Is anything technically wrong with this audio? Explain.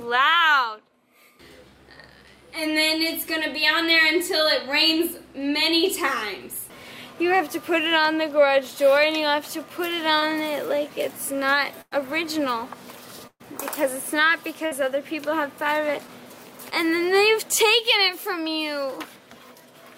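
Yes, there are two kinds of dropout. There's short concealed packet loss at 10.19–10.23 s and 16.70–16.73 s: about 20 ms never arrived, so the receiver extended the last sound, leaving a brief smear or wobble.

There's also a burst of packet loss at 11.81–11.93 s, 13.27–13.42 s and 14.66–14.73 s, covering roughly 100, 120 and 60 ms. Each gap is a fading held buzz or hiss, the middle one dropping to silence for about 50 ms, before the audio jumps ahead.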